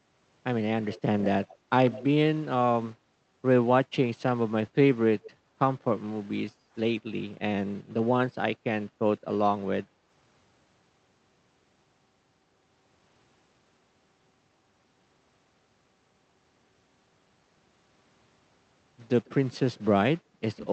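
Echo leak at 0.92 to 1.55 s, and again briefly at 1.87 to 2.04 s: a faint, delayed copy of the speech trails the original by about 150 ms, sitting well below it, roughly 15 to 20 dB down. This is likely the far end's loudspeaker being picked up by its own microphone, with the echo canceller failing to subtract all of it before sending it back. Another short scrap follows at 5.22 to 5.31 s, about 160 ms behind.

Background gated by the echo canceller at 6.51 to 6.75 s and 8.87 to 8.99 s: the room tone behind the speech dips suddenly, by about 10 dB and about 9 dB, for roughly a fifth and a tenth of a second, then comes straight back. The canceller, reacting to loudspeaker playback, clamps the microphone gain hard, and the ambience disappears along with the echo it is trying to suppress.

Echo leak returns at 19.25 to 19.79 s as a very faint trailing copy, around 30 dB down, still about 150 ms late. 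A shallower gating dip of about 6 dB follows at 20.24 to 20.37 s. A final short echo scrap at 20.56 to 20.68 s, at the same 150 ms delay, closes the clip. Throughout, the call codec's band limit around 8 kHz is audible as a dull top end.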